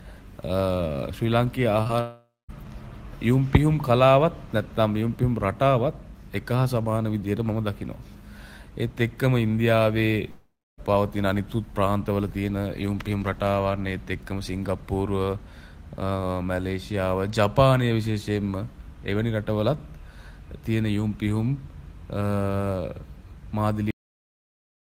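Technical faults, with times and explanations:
1.83 to 1.91 s, short concealed packet loss: two back-to-back gaps of 20 ms each, at 1.83 and 1.87 s, were filled by extending the preceding sound. This causes a brief smeared wobble. A spectrogram shows blurred, repeated harmonics, and the waveform shows a slightly regular stretch.
2.01 to 2.51 s and 10.31 to 10.80 s, long network dropout: each half-second hole begins with a fading continuation of the last sound. Silence then follows, about 0.22 s and 0.29 s respectively, before the sound resumes with that stretch lost, likely from packets never arriving. Both the spectrogram and the waveform show a decaying smear, then a blank gap.
23.91 s, cut-off end: the audio stops mid-sound and drops straight to digital silence with no decay, because the final buffers were never written. The waveform ends abruptly mid-cycle. The spectrogram shows energy ending in a vertical edge, often with a click-like broadband line.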